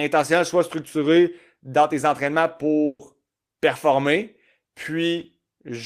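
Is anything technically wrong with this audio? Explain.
Yes. A burst of packet loss runs from 2.85 to 3.01 s. Several packets were lost or arrived too late. The receiver filled 140 ms by holding the last speech sound and fading it, with the final 30 ms silent. The speech resumes with 140 ms missing.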